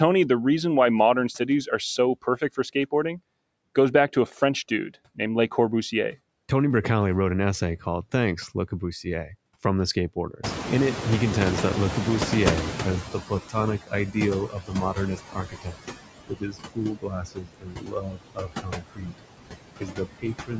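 A noise suppressor is at work through the whole clip. It cuts steady background noise by about 20 dB, frame by frame. The residue sinks between phrases and swells back under the speech.

Speech cut by the noise suppressor first appears from 1.39 to 2.92 s, right after "the reason why modern". The suppressor mistakes parts of the speech for noise and turns them down with the background. Here only about a tenth of a second is hit, dipping by up to about 15 dB. A longer loss follows from 9.04 to 10.44 s, around a fifth of a second, down by about 12 dB.

Around 10.5 s the room noise jumps by about 24 dB. The noise suppressor has to catch up, and its estimate lags for about 2.98 s, from 10.43 to 13.41 s. During that stretch the louder noise comes through with less reduction. It then settles to about 14 dB of cut, about 8 dB below the speech.

The speech cuts then grow more frequent and deeper. 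They fall at 13.12 to 14.17 s, down by about 18 dB, and at 14.49 to 15.85 s, down by about 20 dB. The worst is at 16.27 to 19.22 s, where about three seconds of speech sound swallowed, down by about 22 dB. The last runs from 19.76 s to the end, down by about 20 dB.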